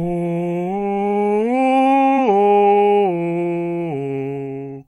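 Compressed frames skipped at 2.14 s: the music jumps forward by what sounds like a single frame, roughly 50 ms, fitting a 46.4 ms frame length, because the decoder never played it.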